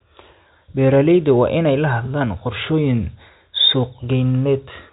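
A speech recording carried over G.711 telephone coding, with nothing technically wrong with it.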